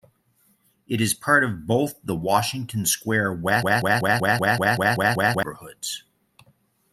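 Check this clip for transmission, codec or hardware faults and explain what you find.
There's one fault here. From 3.63 to 5.43 s, a broken-record loop: a 191 ms fragment repeats nine times, likely a stalled player resending its last buffer, so that stretch of speech is lost.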